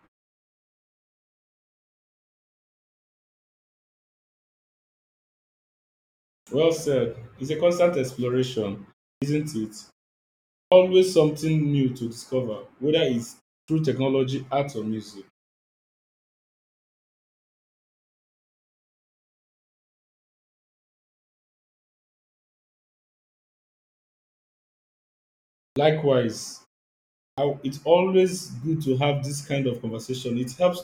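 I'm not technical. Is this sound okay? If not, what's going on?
No. This speech has a clipped start after a pause, at 6.43, 9.18 (right after "a constant exploration"), 10.68 (just before "something new to discover"), 13.64 (just before "technology art or music"), 25.72 and 27.34 seconds. The playback device goes idle during quiet gaps and needs a moment to wake up, so about 40 milliseconds of sound after each gap is lost, and words begin abruptly.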